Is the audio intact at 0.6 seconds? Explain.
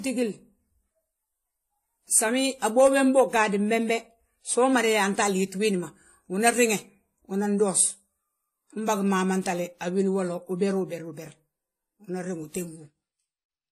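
No. At 0.6 s, as throughout, transcoding between lossy codecs layers a second codec's artefacts over earlier artefacts, with nothing above 14 kHz, likely low-rate AAC re-encoded to WMA.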